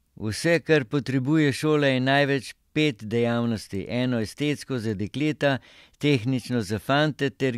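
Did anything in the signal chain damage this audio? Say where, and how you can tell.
No, nothing in this speech recording stood out as damage from any stage of the signal chain when I listened to it.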